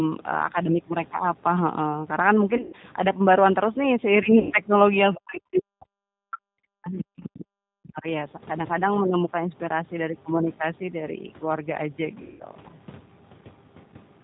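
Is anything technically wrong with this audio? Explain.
Yes. The whole clip is coded speech, and it has several short faults.

Throughout, the speech carries G.729 codec damage, and it is plainly audible. The codec rebuilds each short frame from a vocal tract filter, a pitch predictor and a few pulses, so the voice sounds rough and slightly synthetic. Nothing above 4 kHz survives, which leaves it dull and muffled. The character fits an 8 kbit/s G.729A stream.

At 2.57 to 2.76 s, 4.39 to 4.54 s and 12.22 to 12.43 s there is VoIP packet loss concealed by the speech codec. About 140 ms goes missing in the first event, spread over 160 ms with a longest gap of 120 ms. The second loses 120 ms and the third 180 ms. The decoder fills each gap from its last pitch and filter and fades the gain. The speech stretches into a buzzy tone or a coloured noise that fades, and stays weak briefly afterwards.

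From 5.13 to 5.18 s and again from 7.23 to 7.45 s, a second voice leaks through faintly. It is about 20 dB below the main speech in the first scrap and about 15 dB below in the second. This is the other side's voice leaking through, likely left behind when an echo canceller did not fully remove loudspeaker sound from the microphone.

Between 5.17 and 7.22 s, about two seconds, the main speech dips sharply, by around 40 dB at its deepest. This fits speech suppressed in double talk. The likely mechanism is an echo canceller that could not separate the local talker from the far-end echo while both spoke, so it turned everything down.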